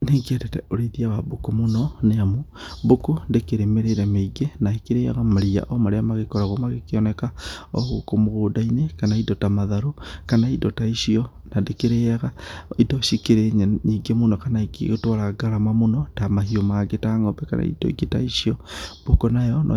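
Nothing in this recording trips the ear as a technical problem, so there's no fault to walk through here.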